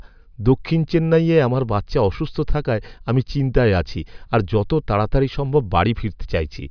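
No technical faults are audible anywhere in the speech.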